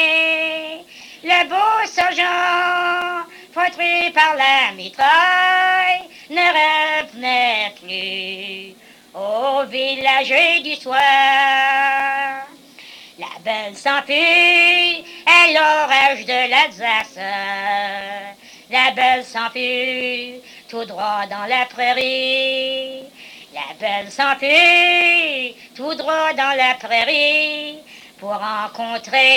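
Periodic USB or driver dropouts run from 1.0 s to 29.0 s: once every second, a few milliseconds of audio drop out to silence, as something stalls the USB bus or audio driver on a fixed cycle, leaving a steady tick wherever sound is present.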